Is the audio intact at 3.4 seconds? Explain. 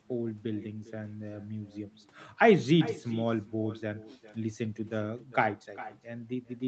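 No. An echo with no canceller runs throughout. The far side's loudspeaker feeds its microphone, so a copy returns about 0.4 s later, about 16 dB quieter.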